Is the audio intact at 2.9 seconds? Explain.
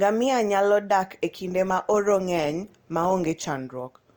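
No, 2.9 s falls inside an adaptive stream at a lower bitrate, running from 1.28 s to the end. The audio switches suddenly, without a gap, to a grainier, more artefact-laden sound, consistent with falling from roughly 64 to 24 kbit/s Opus.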